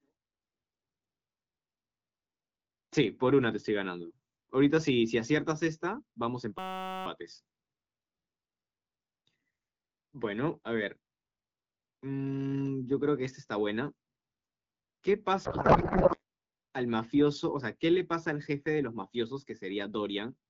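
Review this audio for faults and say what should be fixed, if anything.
From 6.59 to 7.06 s a system hang loop replaces the speech with a steady buzz near 188 Hz: a 5.33 ms fragment, consistent with a 256-sample buffer, repeats 89 times while the driver stalls. Virtually no audio is lost. Prevent it by having the driver mute or zero the ring buffer when its feed stops.

From 15.45 to 16.21 s a codec payload misread turns the speech into garbled noise and warble that barely tracks it, because octet-aligned AMR-WB frames are being parsed as bandwidth-efficient, shifting every field. Prevent it by negotiating and enforcing a single AMR payload format in SDP at both ends.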